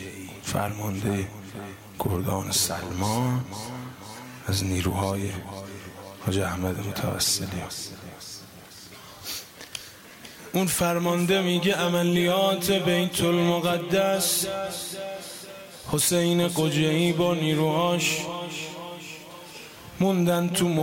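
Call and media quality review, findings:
No call or media quality faults found.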